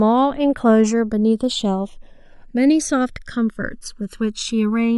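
Channels drifting apart runs throughout: the channels' clocks differ by roughly 200 ppm, so their delay creeps to about a millisecond, sweeping comb notches as slow flanging in mono.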